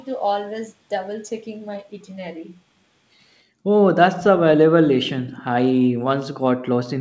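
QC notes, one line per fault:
3.50–3.69 s: background gated by the echo canceller. The room sound drops out by about 40 dB for a couple hundred ms while the canceller clamps the mic, then comes back.
5.27–5.42 s: echo leak. A faint, delayed copy of the speech trails about 272 ms behind, likely far-end loudspeaker pickup the echo canceller didn't fully remove.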